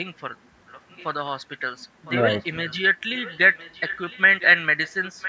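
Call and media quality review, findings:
Echo leak: delayed copy of the sound, about 1.01 s behind, at 0.67–1.05, 2.05–2.13, 2.39–2.75, 3.17–4.21, 4.4–4.47, 4.85–5.29 s, rising from faint to fairly strong. Likely far-end echo canceller residual. Spectrogram: weaker duplicate harmonic patterns offset one second.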